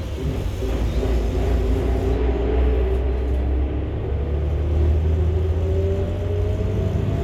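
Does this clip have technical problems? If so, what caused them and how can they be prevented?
No, the recording of sounds has no audible technical faults, and its signal stays intact throughout, so there is nothing here that needs preventing.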